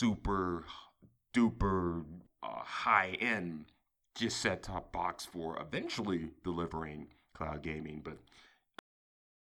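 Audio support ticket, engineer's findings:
Speech stops mid-sound at 8.79 s, hard drop to digital silence, no decay. Cut-off end: final buffers never written or played back.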